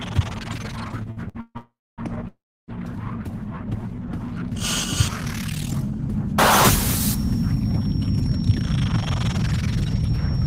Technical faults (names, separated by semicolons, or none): repeated stalls (stutter); call audio freeze; jitter buffer slow-down